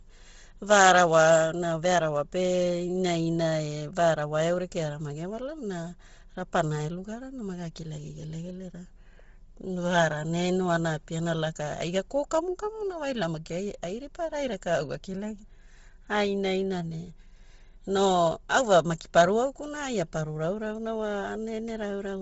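Throughout the speech recording, the upper range sounds breathy and grainy, and nothing at all sits above about 7.7 kHz. This points most likely to heavy Bluetooth LC3 compression, the LE Audio transform codec. Starved of bits, it discards much of the upper spectrum and substitutes shaped noise for the missing detail. The degree of damage fits a low bitrate around 24 kbps with short 7.5 ms frames.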